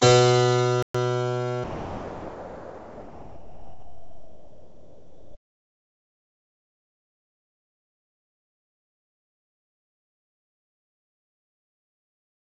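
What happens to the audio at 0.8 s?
At 0.83 s the sound cuts out to complete silence for 120 ms, resuming at 0.95 s. This is a playback stall, most likely the player running short of data or its thread being blocked, so output simply halts until it recovers. Unlike packet-loss concealment in the call path, which is band-limited to about 7 kHz here, the gap is not filled with smeared or synthesized sound. It is true silence, and the audio picks up again.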